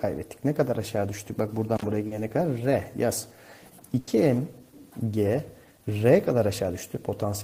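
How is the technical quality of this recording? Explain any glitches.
The recording has three distinct glitches, all in the first 4.1 seconds.

At 1.76 to 1.84 s there is an intermittent contact. A loose connection opens for about 56 ms, cutting the sound out with crackle at both edges.

At 2.07 to 2.14 s comes a short concealed packet loss. About 40 ms never arrived. The receiver extended the preceding sound, leaving a brief smear.

At 3.99 to 4.10 s a burst of packet loss follows. Roughly 80 ms went missing. The last sound is stretched and fades, then the audio resumes further on.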